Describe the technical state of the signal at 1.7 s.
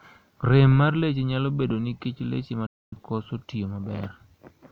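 At 1.7 s the speech signal is intact, with no audible technical fault at that moment.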